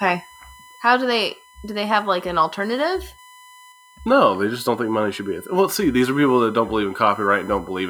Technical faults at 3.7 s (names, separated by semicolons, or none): USB whine